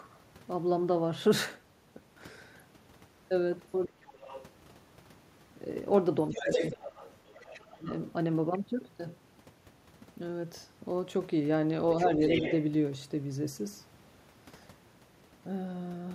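From 4.06 to 4.45 s a faint second voice sits about 15 dB under the talker, likely other side's voice leaking through past the echo canceller. Inside it, 4.19 to 4.26 s, the background is gated by the echo canceller, with the room tone dropping about 8 dB for some 70 ms. The room sound dips, not the talker. From 6.21 to 8.01 s the leak returns nearly as loud as the talker, about 5 dB under. Meanwhile the talker's own voice sinks, mildly from 6.3 to 6.86 s and by about 20 dB from 7.28 to 7.89 s. That is likely speech suppressed in double talk, the canceller ducking both sides. The leak recurs at 11.98 to 12.64 s, about 10 dB down.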